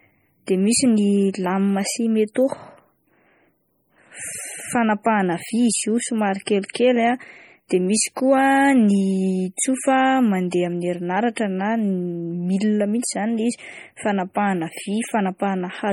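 Throughout the speech there is heavy, watery swirling and metallic chirping on s sounds, likely from MP3 compression at a low bitrate around 32 kbps. Starved of bits, the encoder drops weak frequency lines that flicker between frames. It differs from plain band-limiting because, beyond the cut above 20.7 kHz, the damage moves.

At 10.51 s, pre-echo puts a short hiss of about 15 ms just before a sharp onset. The codec spread the attack's quantisation noise across its whole block, into the quiet moment ahead. Unlike a click, it leads the attack and softens it.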